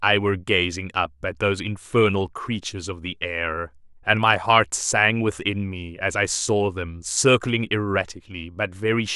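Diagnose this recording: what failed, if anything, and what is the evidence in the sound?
Listening through the speech, nothing stood out as a fault at any stage of the chain.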